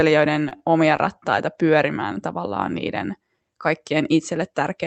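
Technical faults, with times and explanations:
0.33–1.0 s, repeated stalls (stutter): the speech catches four times before "pyörimään tavallaan niiden" as the jitter buffer runs dry and the last sound is held, about 81 ms in all, the longest 31 ms. Unlike packet loss, nothing is skipped; the speech just drags.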